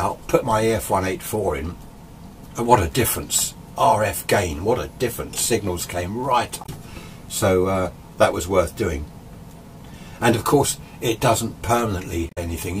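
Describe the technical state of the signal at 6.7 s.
A brief garbled blip cuts through the sound from 6.62 to 6.69 s, lasting about 70 ms. This is damaged data in a compressed stream: corrupted bytes there make the decoder misread its frames and lose sync until it locks onto a following frame header.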